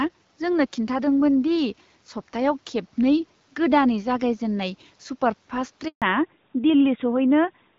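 At 5.88 s the speech cuts out in a handover gap lasting 140 ms, until 6.02 s. The call is being moved between networks, and no speech frames arrive during the switch. The sound dies away fast, then stays silent, and that stretch of speech is lost.

From 6.02 s to the end, there is a fallback to narrowband. Before this, the HD Voice link ran AMR-WB, and the bitrate is consistent with 12.65 kbit/s. It now drops to a narrowband codec. Nothing above 4 kHz remains, so the speech turns duller and rougher.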